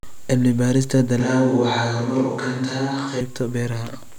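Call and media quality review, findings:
Switch to a distant microphone, 1.20 s to 3.21 s. Speech abruptly turns roomy and hollow, with thinner bass; level roughly unchanged; room noise rises to about 35 dB below speech. Likely cause: close mic dropped out, fallback to a far pickup. Unlike a plain low-cut filter or added reverb, the tone, the reflections and the noise floor all change together at a hard cut, then snap back at 3.21 s.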